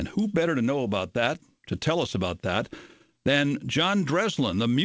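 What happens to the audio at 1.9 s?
Nothing goes wrong at 1.9 s: the speech carries on intact through the call path, with only the usual coding character of the call codec and no content above about 8 kHz.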